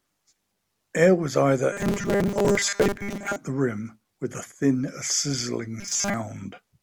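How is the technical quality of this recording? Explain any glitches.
The recording has two glitches of the same type. Robotic sound from repeated short buffers occurs from 1.73 to 3.36 s and from 5.80 to 6.14 s. Audio likely arrived too seldom, so a tiny slice about 5 ms long was looped and most of the real sound skipped. That imposes a rigid, metallic 200 Hz buzz on the speech.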